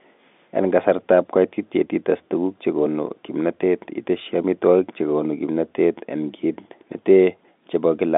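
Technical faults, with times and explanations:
No technical faults can be heard in the speech. It comes through G.711 telephone coding, so the sound is confined to a narrow line band of roughly 200 Hz to 3.6 kHz, and any quantisation noise from the coding sits faintly under the signal at most.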